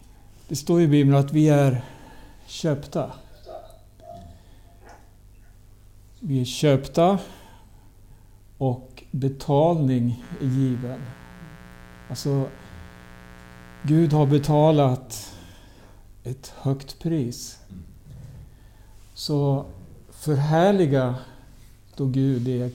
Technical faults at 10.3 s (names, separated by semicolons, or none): mains buzz